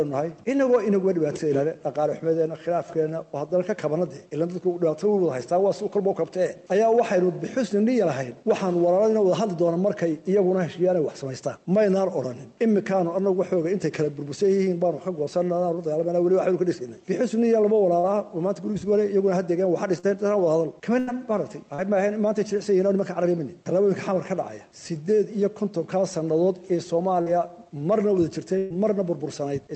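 Short concealed packet loss at 17.99 to 18.06 s and again at 19.99 to 20.06 s: about 40 ms of audio never arrived in time. The receiver bridged each gap by extending the preceding sound, leaving a brief smear or wobble.

A burst of packet loss follows at 20.99 to 21.10 s. Roughly 80 ms went missing in a run, and the concealment stretched the last sound into a fading buzz or hiss before the audio picked up further along, with that stretch gone.

Short concealed packet loss recurs at 21.75 to 21.81 s and 27.22 to 27.29 s, each a similar 40 ms patch heard as a brief smear or wobble.

A second burst of packet loss at 28.58 to 28.73 s is the longest, about 120 ms. The continued sound decays audibly before the audio resumes beyond the missing section.

Throughout, the 32 kbit/s Opus call path band-limits the audio at 8 kHz.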